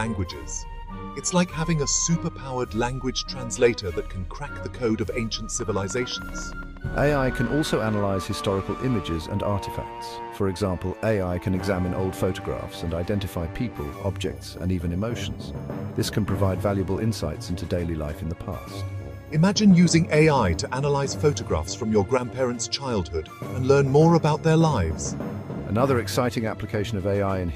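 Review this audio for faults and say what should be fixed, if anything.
A train of clicks runs from 5.60 to 8.32 s. About 30 sharp, similar pulses arrive at roughly 11.4 per second, unevenly spaced. They peak about as loud as the sound itself. The likely cause is interference from nearby equipment or a faulty connection or power supply. To prevent it, keep cables away from noisy gear and check that the interface runs reliably before recording.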